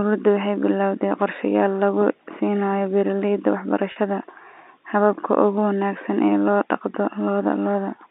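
At 3.92 s the speech briefly holds a slightly buzzy, sustained tone for about 40 ms, resuming at 3.96 s. This is packet loss with pitch repetition: the receiver filled a gap, consistent with two 20 ms packets, by repeating the last pitch period.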